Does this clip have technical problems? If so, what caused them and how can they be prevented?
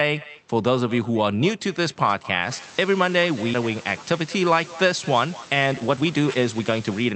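Yes. Throughout the speech there is echo with no canceller: every phrase is followed, about a fifth of a second later, by a copy roughly 20 dB quieter, sounding thinner. This happens when the far end plays the call through a loudspeaker and its microphone sends it straight back. Room reverberation would smear into the sound, but here the copy arrives as a distinct, delayed repeat. Enabling acoustic echo cancellation at the far end, or having that person use headphones, prevents it.

From 5.25 s to 7.13 s a jitter buffer speed-up makes the speech run at about 117% speed while the pitch stays the same, trimming roughly a third of a second overall. The receiver's buffer had built up excess delay, so it repeatedly cut out tiny pitch-period slices to catch up. A pitch shift or simply playing the audio faster would raise the voice, and packet loss would leave gaps or glitches. Here the speech sounds hurried. 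A steadier network, or a buffer that drains excess delay more gradually, prevents it.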